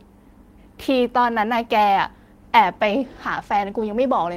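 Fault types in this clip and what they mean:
Call bitrate drop: the call's bandwidth estimate fell, so the encoder had to squeeze the speech into far fewer bits and code it more coarsely. From 2.42 s the speech turns rougher and more watery, which fits a drop from about 32 kbps to 18 kbps. It sits at that lowest rate for roughly 1.5 s, then clears up at 4.03 s.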